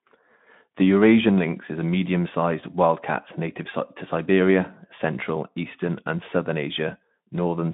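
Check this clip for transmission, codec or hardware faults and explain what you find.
No transmission, codec or hardware fault turns up in this speech clip. The Speex path is working as intended: the sound sits in a narrow telephone-like band of roughly 150 Hz to 3.6 kHz, with nothing above 3.8 kHz, and only a light codec roughness that fits a setting around 15 kbps.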